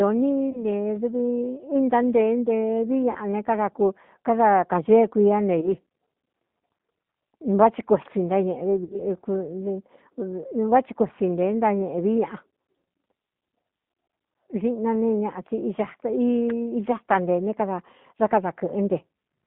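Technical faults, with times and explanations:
Throughout: G.729 codec. The speech went through a low-bitrate G.729 voice coder running at 8 kbit/s. That coder does not keep the waveform. It rebuilds each 10 ms frame from a vocal tract filter, a pitch predictor and a few pulses. The line passes only about 150 Hz to 3.6 kHz, so the sound is muffled and thin. The coding damage is plainly audible as a rough, slightly synthetic texture over the voice.
0.50 to 0.63 s, 3.11 to 3.18 s, 5.61 to 5.74 s (just after "káda kāñee kuiá ne") and 8.84 to 9.02 s: VoIP packet loss concealed by the speech codec. At these points packets went missing. The gaps were 20 ms, 40 ms, 20 ms and 60 ms of audio. Each time, the decoder filled the hole by repeating its last pitch and filter with falling gain, which gives a brief smeared buzzy tone or coloured noise that fades. Because each frame builds on the one before, the voice stays weak or distorted for a short while after the gap. 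The longest dropout is at 8.84 s.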